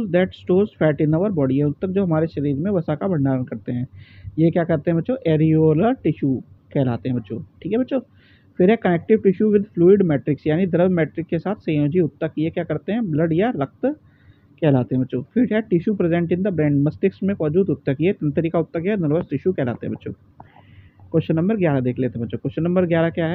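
Nothing technically wrong can be heard anywhere in the recording. The audio runs without any audible fault at any point, so there are no times or causes to report.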